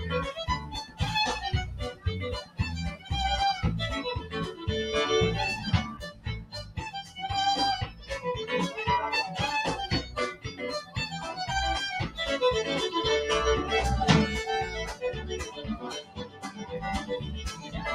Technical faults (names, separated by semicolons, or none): noise suppressor applied to music or sounds; sound cut by the noise suppressor